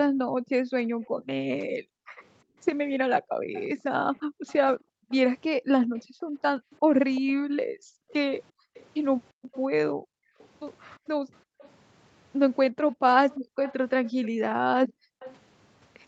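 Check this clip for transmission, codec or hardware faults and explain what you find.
Two faults affect this speech clip: the echo canceller gating the background, and echo leaking back into the signal.

Background gated by the echo canceller occurs between 0.18 and 11.58 s, roughly five seconds in total, and between 12.75 and 15.2 s, about a second in total. The canceller clamps the microphone hard while the loudspeaker plays, so the room tone drops by up to about 40 dB and then returns. These are sudden holes in the ambience. They don't fade like a noise gate and aren't packet dropouts.

Echo leak appears at 3.55–6.02 s, 7.15–10.48 s, 11.58–11.7 s, 13.3–14.27 s and 15.2–15.35 s. A faint copy of the speech trails the original by 348 ms, mostly about 20 dB down, near 15 dB down around 13.3 s and near 30 dB down at 11.58 s. It likely comes from the canceller failing to remove all of the loudspeaker sound. 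The fixed delay distinguishes it from room reverberation.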